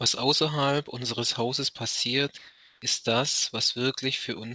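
From 2.38 to 2.82 s, in a pause in the speech, the quiet background becomes a smooth, featureless hiss for 440 ms, its level shifting only about 1 dB. This is likely comfort noise in place of the background: transmission paused, and the receiver filled the gap with synthetic noise.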